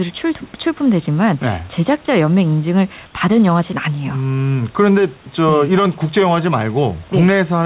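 From 3.06 to 3.14 s, an 80 ms stretch of the room background turns smooth and featureless, about 2 dB quieter. This is likely comfort noise in place of the background: transmission paused during silence, and the receiver filled the gap with synthetic noise shaped like the room.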